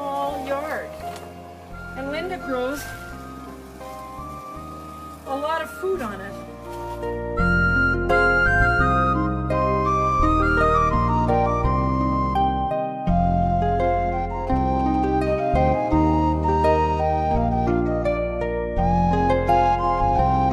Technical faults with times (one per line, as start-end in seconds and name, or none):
14.47-15.27 GSM signalling bursts
15.27-16.53 GSM phone buzz